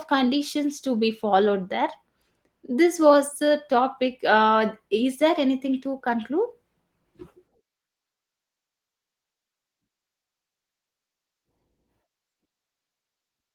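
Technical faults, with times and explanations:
Nothing here calls for attention: the speech comes across steady and intact, with only the light texture you'd expect from Opus voice coding.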